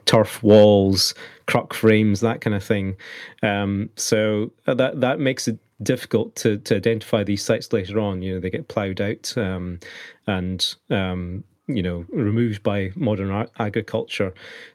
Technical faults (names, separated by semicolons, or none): microphone overload; microphone volume stepped down